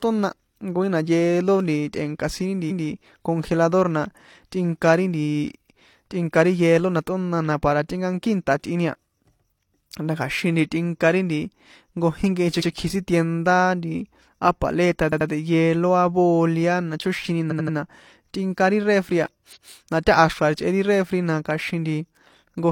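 Repeated frames at 2.67 s, 12.57 s, 15.08 s (after "nti á paleta"), 17.47 s (after "na chóxini") and 19.52 s (after "tꞌinka ri refri a"): a 171 ms or 85 ms block of compressed audio plays again, once, or two or three times at 15.08 and 17.47 s. Each repeat is a stutter, and the clip grows by 85 to 256 ms each time.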